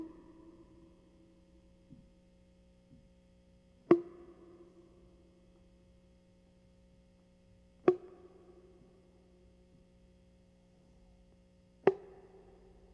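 Music, with no technical fault audible anywhere in the clip.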